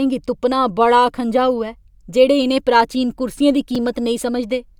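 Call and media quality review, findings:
Repeated buffer at 3.75 s in the speech: a click or brief buzz. Playback device underrun; with no fresh audio in time, the last chunk replayed once, which fits a 5 ms buffer, and a few milliseconds of audio were lost. It differs from a packet-loss dropout because the hard join is a replay, not a gap or a smoothed fill.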